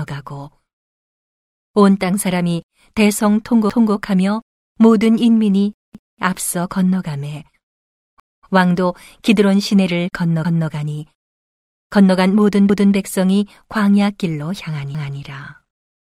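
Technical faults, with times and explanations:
3.70–3.95, 5.95–6.20, 8.20–8.45, 10.45–10.70, 12.70–12.95 and 14.95–15.20 s: overlapping chunks. The sound was handled in 2 s blocks, each starting 250 ms before the previous ended, so that stretch replays at every join, giving a regular stutter.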